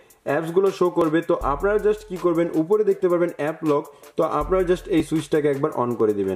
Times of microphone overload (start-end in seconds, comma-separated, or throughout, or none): none